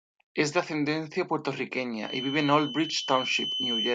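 A feedback whistle runs from 2.0 s to the end of this speech clip: a thin, steady 3 kHz tone sits only a few decibels below the voice, swelling and fading slowly in level. It is likely a loudspeaker-to-microphone loop held right at the edge of feedback.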